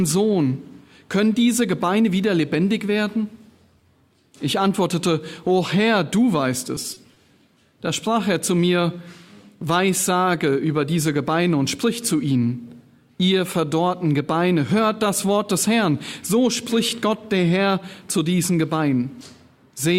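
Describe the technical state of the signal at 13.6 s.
At 13.6 s the signal is intact, with no dropout, distortion, glitch or other technical fault to be heard at that moment.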